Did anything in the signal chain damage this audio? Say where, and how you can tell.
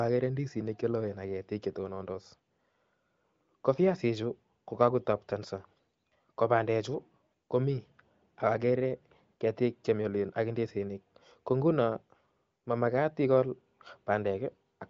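No, nothing in the chain has damaged this speech: the band stops at about 7.6 kHz and the top end sounds smooth rather than raspy, which fits an AMR wideband (HD Voice) codec path at one of its highest rates, around 23 kbit/s, with any coding trace faint at most.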